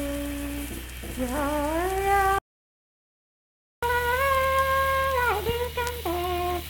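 At 2.38 s the sound stops dead and stays silent until 3.83 s, a gap of about 1.4 s. This playback stall is likely the player running out of buffered data, or its output thread being blocked.

From 3.83 s to the end, everything runs noticeably fast and sits audibly higher, about four semitones up. This is catch-up at higher speed: the player resamples its backlog at 1.25 times normal speed to recover the time lost during the stall.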